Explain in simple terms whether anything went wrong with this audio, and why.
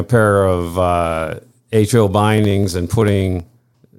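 From about 2.38 s to 3.91 s the speech picks up a steady run of ticks, around thirty of them, every 63.5 ms. That's periodic USB or driver dropouts: something kept stalling the audio path, and each time a tiny slice of sound, well under a millisecond, was simply skipped.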